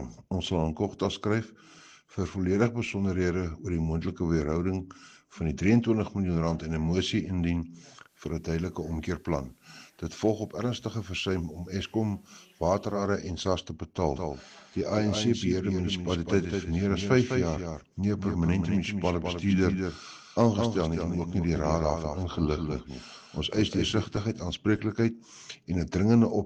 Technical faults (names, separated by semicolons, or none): digital radio blending to analogue; doubled audio track